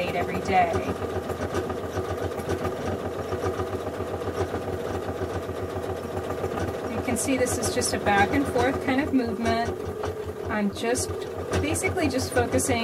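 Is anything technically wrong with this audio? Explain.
Yes. At 2.72, 4.72, 6.58 and 11.08 s, a brief garbled flutter lasts about 0.2 s. This is frames out of order: two adjacent blocks of about 93 ms, which fits runs of four frames each, were swapped and decoded that way.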